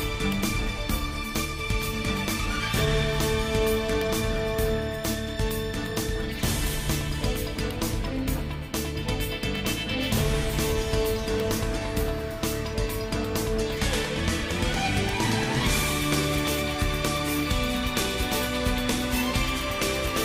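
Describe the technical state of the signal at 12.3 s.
At 12.3 s the signal is intact, with no dropout, clipping, distortion or other technical fault to be heard at that point.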